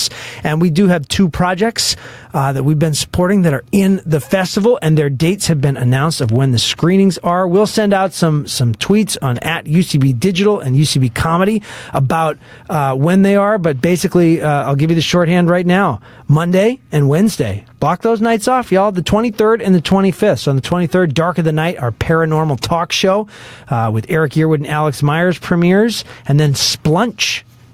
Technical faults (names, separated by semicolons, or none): gain pumping